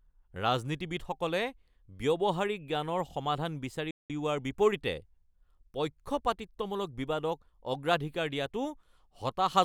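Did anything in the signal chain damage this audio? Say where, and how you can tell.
Yes. At the playback stage, the speech cuts out abruptly at 3.91 s and the output stays silent until 4.10 s, a gap of about 190 ms before the speech carries on. This is a playback stall, most likely the player's buffer running dry or its output thread being held up, so nothing reached the output. A network dropout would often be smeared by loss concealment. This gap is clean, dead silence, long enough to hear as a hitch.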